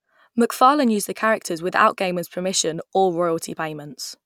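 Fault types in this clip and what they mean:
No technical faults can be heard in this speech recording; the signal stays continuous and steady throughout.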